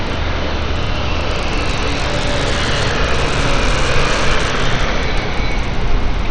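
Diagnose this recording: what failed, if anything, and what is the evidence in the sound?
Throughout the recording the sound is dull and gritty. Nothing is audible above about 9.9 kHz, and coarse grainy noise clings to everything. At the codec stage, this likely points to Bluetooth SBC compression at a starved bit pool, around 80 kbps. The top sub-bands get no bits and the rest are roughly quantised.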